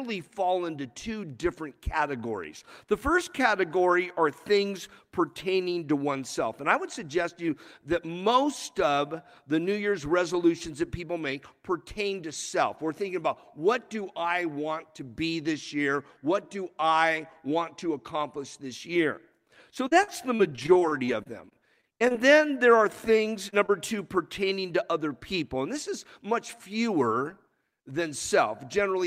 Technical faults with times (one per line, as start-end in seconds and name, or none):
19.87-22.16 repeated packet loss (robotic sound)
23.50-23.70 short concealed packet loss